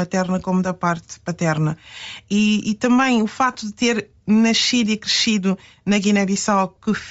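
Across the whole speech clip there is a breathy, grainy edge on the upper frequencies, most likely from Bluetooth LC3 compression at a low rate around 32 kbps. The codec discards much of the high spectrum and refills it with noise, so a spectrogram shows smeared, speckled texture above the voiced harmonics instead of clean structure.

At 3.53 to 3.55 s, between "e também o" and "de ter nascido e", lost LE Audio frames leave about 20 ms, which fits two 10 ms LC3 frames going missing. The decoder repeats the last spectrum with scrambled signs, giving a brief noisy smear. On the spectrogram the harmonics blur into a short noise patch, and the waveform's periodicity breaks there. At 6.76 s a single shorter loss of about 10 ms produces the same quick smear, visible as a narrow vertical noisy band.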